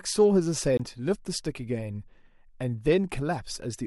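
At 0.77 to 0.80 s the speech is interrupted by a CD skip. A physical knock or a surface flaw has thrown the laser pickup off its track onto another turn of the spiral, so the player drops out for a brief mute of roughly 20 ms and then resumes reading from a different point on the disc. It is heard as a short tick followed by an abrupt discontinuity, with the speech carrying on from a displaced position rather than where it left off.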